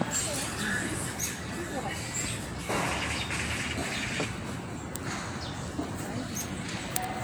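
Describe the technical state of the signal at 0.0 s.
No fault is present at 0.0 s, and the signal is intact at that moment.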